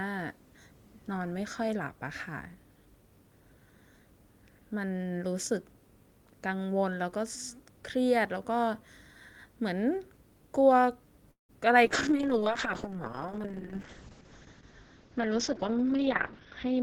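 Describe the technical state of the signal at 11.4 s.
At 11.4 s the speech stalls: from 11.31 to 11.51 s the last sound is drawn out into a brief buzz that fades to about 130 ms of silence, then resumes where it stopped. This call audio freeze likely came from delayed packets draining the jitter buffer, inserting a 176 ms gap without losing audio.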